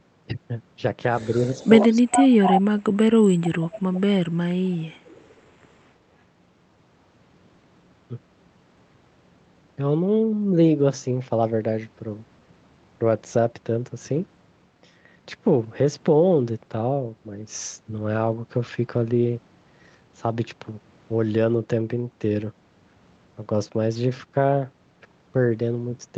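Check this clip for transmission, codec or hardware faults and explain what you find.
Two related faults appear in the first 5.4 seconds of this speech, both consistent with a speakerphone echo canceller struggling.

Echo leak: from 1.16 to 2.62 s, 3.75 to 4.01 s and 5.06 to 5.40 s, a copy of the speech returns 124 ms late. It is likely that the far side's canceller failed to remove its loudspeaker pickup. The first stretch sits only about 5 dB below the speech. The later two fade to faint traces.

Speech suppressed in double talk: at 1.27 to 1.54 s, 1.82 to 2.31 s and 2.56 to 3.75 s, the speech dips while the other side's sound plays on the loudspeaker. It first sinks by about 5 dB, then by about 30 dB, then by about 35 dB for roughly a second. The canceller likely attenuated both signals because it could not tell them apart. The audio travels over an Opus call path band-limited to 8 kHz.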